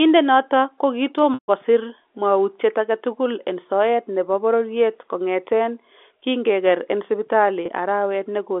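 At 1.34 s the speech breaks off for about 140 ms, until 1.48 s, in a packet loss with pitch repetition. Over the telephone band, capped near 3.5 kHz by the G.711 line, the receiver loops the last pitch period, which sounds briefly buzzy before fading toward silence, then cross-fades into "kosiir mwawutyet agetukul en". The gap fits seven lost 20 ms packets. A spectrogram shows flat, repeated harmonics that thin out, and the waveform shows identical cycles shrinking. A shorter 20 ms loss at 7.66 to 7.68 s, likely a single packet, only holds the note slightly.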